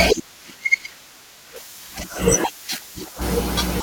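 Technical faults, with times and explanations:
1.56 s to end: pre-emphasis left on. A treble boost was applied and never undone. The high end sits about 8 dB above 1 kHz at 10 kHz, which fits the CD 50/15 µs curve. The speech turns thin, bright and sibilant.
2.03 s: compressed frames skipped. About two whole frames never played, so the speech jumps ahead by roughly 40 ms. That fits a 21.3 ms frame.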